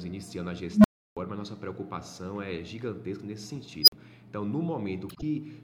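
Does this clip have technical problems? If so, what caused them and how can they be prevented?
Yes. An unstable filter appears twice. At 0.71 s a low tone around 200 Hz swells over 133 ms, clips, then cuts to about 325 ms of silence. At 3.82 s a high squeal near 5 kHz builds in 58 ms, then drops out for 46 ms. Bad recursive coefficients let the output grow until it overflowed. Checking that every filter pole stays inside the unit circle prevents this.

Frames out of order occur from 5.09 to 5.23 s. Two neighbouring blocks of about 52 ms play swapped, giving a garbled flutter. Reordering packets by sequence number before decoding prevents it.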